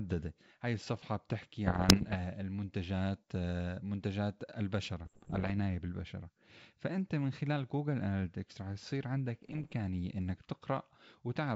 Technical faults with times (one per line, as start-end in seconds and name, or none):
1.66-2.16 bit errors on an ADPCM link
5.04-5.51 bit errors on an ADPCM link
9.42-9.76 bit errors on an ADPCM link